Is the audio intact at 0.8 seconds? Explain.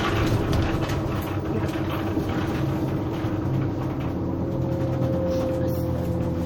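No. At 0.8 seconds, as across the whole clip, the sound is dulled at the top and has a watery, swirling quality, with faint detail flickering in and out. This is likely MP3 compression, at a strength that fits a bitrate around 64 kbps. Short of bits, the encoder cuts the treble above a fixed frequency and drops quieter frequency components, which then switch on and off from frame to frame, producing that unstable texture.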